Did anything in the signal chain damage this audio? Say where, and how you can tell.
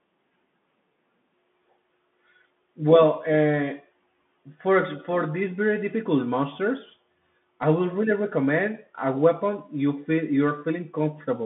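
Yes, at the codec: the whole speech clip went through a Bluetooth CVSD headset codec, which fits its 64 kbps one-bit stream. The band sits roughly 150 Hz to 3.5 kHz with nothing above 3.8 kHz, s sounds turn scratchy, and a granular hiss runs underneath as the adaptive step chases the waveform.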